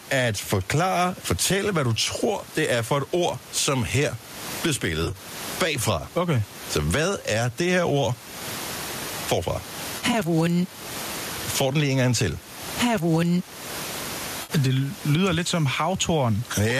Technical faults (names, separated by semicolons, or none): gain pumping; AAC frame loss with concealment